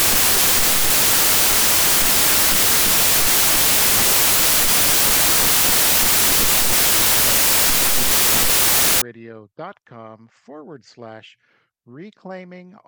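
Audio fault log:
0.0–9.02 s, samples built from the wrong bytes: the sound is replaced by loud, harsh broadband noise, because each sample's bytes are assembled in the wrong order or at the wrong offset, so the rapidly changing low bits end up as the most significant part of every value. Unlike background hiss laid over a signal, this noise does not sit beneath the material. It replaces it.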